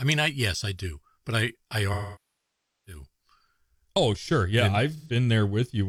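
After "do but I I", from 1.93 to 3.04 s, the speech smears, decays to a very faint noise floor and fades back in. After "sure yeah and", 4.96 to 5.15 s, a brief noisy smear. Both are AAC frame loss with concealment, where the decoder rebuilt missing frames from the last good spectrum.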